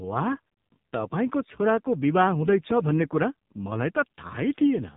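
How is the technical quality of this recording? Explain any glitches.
Poor: the speech is narrow and heavily processed from start to finish. Throughout the clip it sounds buzzy, thin and synthetic, with nothing above 3.8 kHz. This is AMR narrowband mobile codec damage: the phone codec rebuilds the voice from a coarse vocal-tract model and sparse pulses, and the heavy artefacts fit a low mode near 5.9 kbps.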